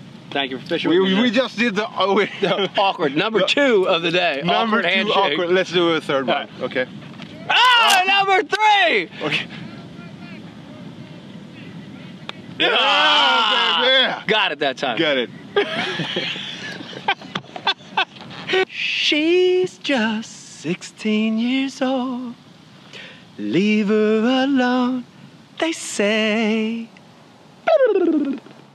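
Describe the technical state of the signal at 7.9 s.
At 7.9 s the signal is carrying cable scratch noise, which runs from about 7.65 s to 7.98 s. It is likely caused by a worn cable, connector or control being disturbed, so that the contact resistance flickers rapidly and injects ragged bursts of noise into the path. For roughly a third of a second this sits fairly high, around 10 dB below the signal, and is heard as a rough scratching rustle laid over the sound.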